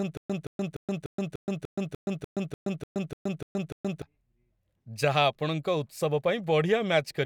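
Speech opens already caught in a stutter with silent gaps that lasts until 4.02 s. A burst of about 173 ms repeats 13 times, each followed by about 123 ms of dead digital silence, a steady cycle of roughly 296 ms. The likely cause is a stalled player or stream replaying its last fragment at each retry before running empty. Unlike random dropouts, the identical burst returns at an even pace, and the speech that should have filled that span is lost.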